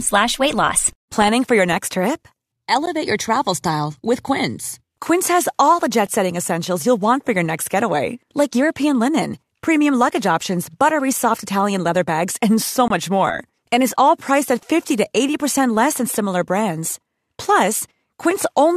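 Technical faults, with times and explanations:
2.86 s and 12.88–12.90 s, gap between stream segments: the speech drops out abruptly after "for your next trip" for about 14 ms, and after "leather bags and so" for about 23 ms. Timestamps of adjacent segments, which fit a 2-second segment length, fail to meet, so the player inserts digital silence. Nothing is lost, but the clip gains that time. The waveform shows a flat silent run with sheer edges, and the spectrogram shows a thin vertical blank band.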